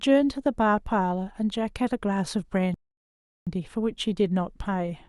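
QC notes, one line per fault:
2.74–3.47 s, rebuffering stall: the speech drops abruptly to silence for about 0.73 s, then picks up at exactly the point where it stopped, with nothing skipped or repeated. The player exhausted its downloaded audio and halted playback until more data arrived. Because it paused rather than dropping content, the gap sounds like dead air inserted mid-stream. The material stays intact, but the clip's running time grows by roughly three quarters of a second.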